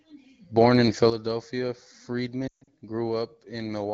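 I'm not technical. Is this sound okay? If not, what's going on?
No. At 1.10 s the whole recording suddenly drops to a much quieter level, and the voice and the background hiss fall together in one instant, with no gradual fade. It stays at that lower level to the end. This is a sudden gain jump: the loudness setting changed all at once instead of easing over. The likely cause is a volume or level adjustment somewhere in the chain that was applied without smoothing.

From 2.47 to 2.69 s the voice stumbles. It briefly smears and quickly sinks toward silence, with the longest gap lasting about 0.14 s. Then it returns sounding weak and a little rough. These are lost AMR speech frames: radio errors on the phone call corrupted small chunks of the signal, so the phone filled each gap by repeating the last good sound and turning it down until real audio came through again. The HD Voice phone coding itself does only light damage and leaves the speech clear.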